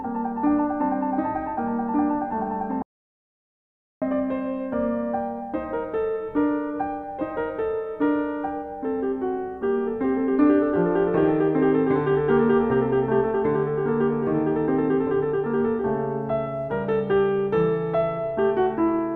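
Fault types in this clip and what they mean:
Audio dropout to silence: the music cuts out abruptly at 2.82 s and resumes mid-flow at 4.02 s, losing about 1.19 s. The waveform drops to a flat line and the spectrogram shows a blank band, likely from a lost input link.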